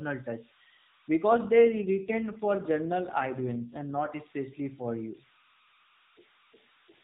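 A speech recording carried over the AMR narrowband mobile codec, with nothing passing above 4 kHz. Throughout, a tone at around 1 kHz sits about 28 dB below the speech and is clearest in pauses. These are converter idle tones: an undithered delta-sigma converter falls into repeating bit patterns when its input is small, and those patterns produce the tone. From 1.29 to 4.15 s, ending just before "especially for you", the voice turns rougher and more synthetic, with no gap and no change in bandwidth. This is an AMR rate drop, and the added roughness fits the codec stepping down from 12.2 to 5.9 kbps to spend bits on error protection.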